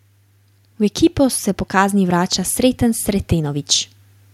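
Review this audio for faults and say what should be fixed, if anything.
Automatic gain rising runs from 0.7 s to 3.69 s: the gain control judged the speech too quiet and raised it by about 5 dB, so voice and background noise swell together. The waveform envelope and the spectrogram's noise floor both brighten steadily. Setting a correct input level, or using slower or fixed gain, prevents it.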